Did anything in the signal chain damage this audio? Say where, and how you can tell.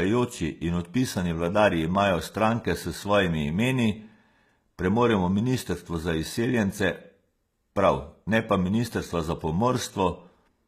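Yes. HE-AAC compression, codec stage, throughout: gritty, lispy s sounds and nothing above 14.9 kHz, likely spectral band replication rebuilding treble at roughly 20 kbps.

Loud pop, analogue wiring, 1.95 to 1.97 s, just before "stranke s": one sharp pop peaking a few decibels above the sound, likely a voltage pulse.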